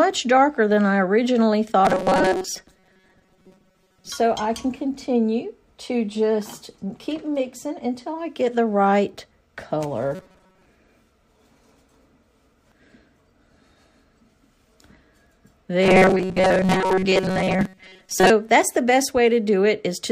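Robotic sound from repeated short buffers at 1.85–4.10 s, 10.15–10.66 s and 15.82–18.30 s: new audio likely arrives too late, so a sliver of roughly 5 ms is looped for most of each stretch, imposing a rigid, metallic 188 Hz buzz.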